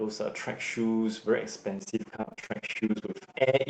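From 1.79 s to the end, overlap-add ripple sets in: the frames were rejoined with overlaps that don't sum to a steady gain, so the level swings by about 60 dB around 15 times a second. Unlike a slow tremolo effect, it sounds like a harsh, mechanical flutter.

Between 2.21 s and 2.52 s, repeated packet loss adds a choppy texture. Short holes follow one another, the longest about 25 ms, and nearly half the stretch is patched by stretching the preceding sound. That gives choppy sound with bits missing, rather than the regular pulsing of the ripple. Throughout, the call codec holds the audio to an 8 kHz bandwidth.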